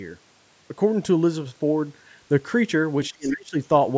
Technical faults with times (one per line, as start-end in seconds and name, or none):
3.05-3.33 other side's voice leaking through
3.10-3.57 speech suppressed in double talk